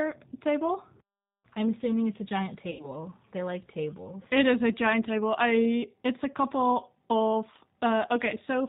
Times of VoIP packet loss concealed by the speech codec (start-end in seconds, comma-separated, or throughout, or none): 2.71-2.88